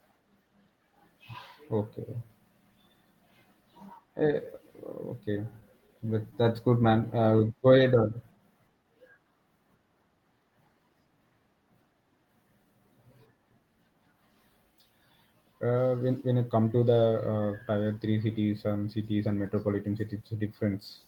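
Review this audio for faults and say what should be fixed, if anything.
Scattered short gaps, 5.51 to 6.43 s, just before "good man": about five lost or late packets, each patched by extending the preceding sound, leave brief ticks and smears. A larger jitter buffer or forward error correction on the network link would prevent this.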